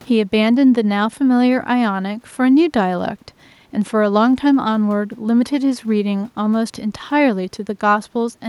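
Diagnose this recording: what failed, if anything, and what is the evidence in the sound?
Nothing failed in this speech recording, and no stage of the chain leaves an audible mark. There is no evidence in the sound of a fault at any point, so there is nothing to diagnose.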